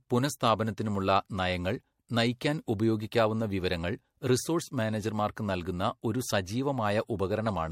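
Generation loss runs throughout this speech clip. The sound is swirly, smeared and hollow, with blurred consonant attacks and nothing above 16.5 kHz. The likely cause is repeated lossy coding: the audio seems to have gone through MP3 several times, perhaps four, which fits 64 kbit/s passes. Each re-encode quantises again on a shifted frame grid, so noise and spectral holes pile up beyond what a single pass at that bitrate would leave.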